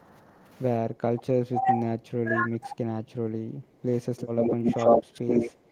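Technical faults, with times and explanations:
0.23 to 0.43 s, 3.04 to 4.33 s and 5.07 s, background gated by the echo canceller: the room sound behind the speech sinks, by about 7 dB in the first stretch and about 13 dB in the later two, then comes back. The canceller clamps down on the microphone while the loudspeaker plays. Unlike double-talk suppression, the speech keeps its level and tone here. Only the ambience ducks, and it recovers as soon as the canceller releases.
1.06 to 2.76 s and 4.61 to 4.80 s, speech suppressed in double talk: the speech itself dips sharply. The drop reaches around 25 dB across about a second and a half in the first stretch and around 15 dB in the brief second one. This is likely an echo canceller that could not separate the near talker from loudspeaker echo while both sides spoke, so it turned everything down. The speech level falls, which sets it apart from the background-only gating.
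4.18 to 5.51 s, echo leak: a second copy of the speech trails the original by 84 ms, at a level close to the speech itself. The likely cause is a loudspeaker-side echo canceller that left some of its microphone pickup unremoved and sent it back. Gating and suppression take sound away, while this adds a delayed repeat on top.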